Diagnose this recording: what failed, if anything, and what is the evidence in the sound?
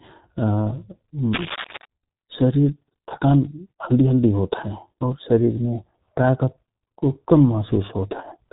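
The speech sounds muffled and hoarse from start to finish, with smeared consonants and nothing audible above about 3.8 kHz. This is the G.723.1 codec, at the codec stage. It codes the voice in 30 ms frames and rebuilds it from a coarse, slowly updated model of the vocal tract, so fast articulation blurs and fine detail is lost. The heavy damage fits a low-rate stream of around 6.3 kbit/s.

From 1.33 to 1.86 s a dense, irregular scratching and rustling sits over the speech. It ends just before "शरिर थकान हल्दि हल्दि" and is fairly loud, only a few dB below the speech. The likely cause is cable scratch noise in the analogue wiring. A worn cable or connector was disturbed, and its contact resistance jumped about rapidly, injecting uneven bursts of noise into the signal for that half second.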